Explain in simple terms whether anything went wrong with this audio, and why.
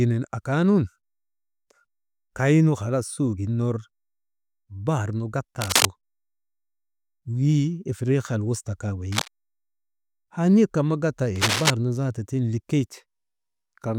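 Three short bursts of scratchy, rustling noise cut across the speech: at 5.61 to 5.87 s just after "bahar nu", at 9.12 to 9.28 s after "ifiriikiyal wuta kaa", and at 11.36 to 11.70 s after "kan ma gatta". The first and last are about as loud as the speech, and the middle one is a little softer. This is cable scratch noise, likely from a worn cable or plug being moved, so its electrical contact flickered and added crackle.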